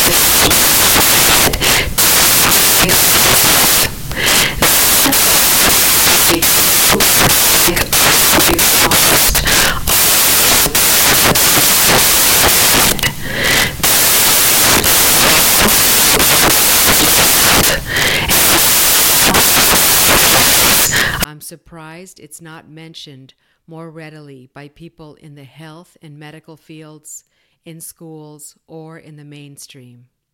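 Speech clip with samples built from the wrong bytes from 0.0 to 21.24 s. Misassembled bytes turn low bits into loud, harsh broadband noise, close to white on loud passages.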